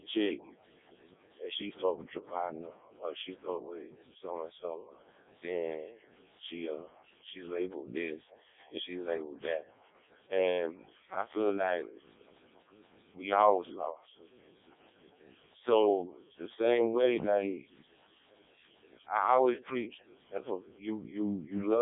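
From start to finish the speech sounds robotic and buzzy, thin and boxed into roughly 300 Hz to 3.7 kHz with nothing above 3.8 kHz. This is heavy Codec 2 vocoder damage, consistent with its lowest 0.7 kbit/s mode: the voice is rebuilt from sine waves driven by pitch, voicing and envelope rather than the original waveform.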